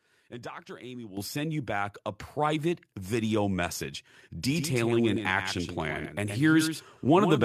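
A speech recording with two faults. At 1.17 s the microphone volume is stepped up: speech and background jump together by about 10 dB, as software raises the input gain. From 4.43 s to the end there is a doubled audio track. A flat, full-band copy appears abruptly, roughly 150 ms behind and about 10 dB quieter, likely from a second, slower capture path.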